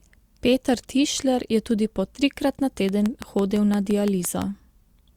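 From 2.89 s to 4.43 s, right after "tudi po trikrat na", a train of clicks ticks over the speech at a regular 5.9 per second, about ten in all, peaking about 10 dB above the signal. The likely cause is electrical interference or a faulty connection or power supply. A spectrogram shows evenly spaced thin vertical broadband lines, and the waveform shows matching sharp spikes.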